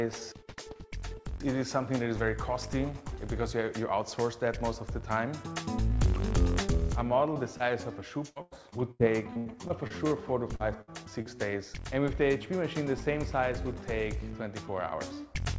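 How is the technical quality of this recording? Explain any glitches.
The recording carries packet-loss damage between about 7.3 and 11.3 s. The audio is band-limited to 8 kHz throughout, consistent with a G.722 call path.

Short concealed packet loss occurs at 7.34, 7.57, 10.56 and 11.22 s. Each time, 20 to 40 ms of audio failed to arrive in time. The decoder extended the preceding sound to bridge the hole and then crossfaded back, which produces a brief smear or wobble lasting a few tens of milliseconds.

Repeated packet loss with a robotic sound runs from 8.30 to 10.13 s. Nine separate gaps, totalling about 420 ms of missing audio and up to 96 ms each, were patched in quick succession. Roughly a quarter of that stretch is synthesized, so it sounds choppy, with fragments dropped out.

A burst of packet loss sits at 10.81–10.90 s. About 60 ms of consecutive audio was lost. The receiver held the last sound and faded it, leaving a short buzz or hiss before playback resumes with that segment gone.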